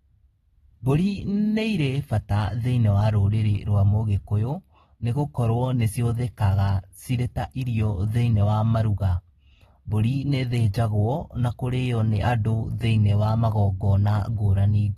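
AAC compression runs throughout the speech, from start to finish: nothing sounds above 13.8 kHz, and sibilants take on a smeared, fizzy, warbling texture. The likely cause is an encoder quantising the spectrum coarsely, as at a low bitrate around 24 kbps.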